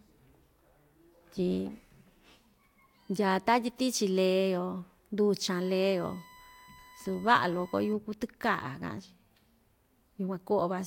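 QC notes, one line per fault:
5.52 to 7.93 s, USB whine: a steady, fixed-pitch whine at 1 kHz sits under the speech, roughly 25 dB below it. This is the USB bus's 1 ms frame cycle drawing current in pulses, which leaks into the audio through shared power or ground.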